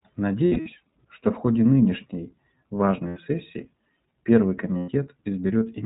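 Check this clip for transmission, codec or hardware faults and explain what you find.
Yes, there are two related faults: the whole clip has been through the iLBC codec, and three short stretches show lost iLBC frames being concealed.

The iLBC codec damage is plainly audible across the speech. The codec works in fixed frames, and the coding here fits its 20 ms, 15.2 kbps mode. Each frame's excitation is coded independently of the one before, so the result sounds slightly rough and synthetic. The band is cut at 4 kHz, so the upper consonant detail is missing and the speech sounds narrowband, like a telephone.

Lost iLBC frames occur at 0.46 to 0.69 s, 3.08 to 3.19 s and 4.78 to 4.90 s. The first event is about 140 ms of loss scattered over 200 ms, with the longest run around 70 ms. The others are losses of 80 ms and 100 ms, which fits four and five frames. In each gap the decoder repeats the last pitch cycle blended with noise. 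This is heard as a held, slightly buzzy or breathy vowel. Because frames decode independently, clean speech returns almost immediately after each gap.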